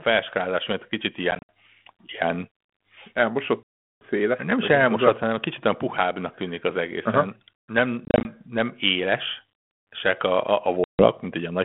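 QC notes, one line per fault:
throughout: mains hum, a steady 50 Hz tone sitting roughly 35 dB under the speech. A ground loop or nearby transformer is leaking the power line into the signal path, so the low drone runs under everything, including the pauses.
1.31–1.49 s, 3.63–4.01 s, 8.05–8.31 s, 10.84–11.08 s: packet loss on an ADPCM call. Stretches of the G.726 stream drop out and are replaced by hard-edged silence: 110 ms scattered over 180 ms, a solid 380 ms gap, 120 ms scattered over 200 ms, and a 150 ms gap. The receiving decoder's adaptive predictor and step size lose step with the sender's, so speech comes back slightly distorted before settling within tens of milliseconds.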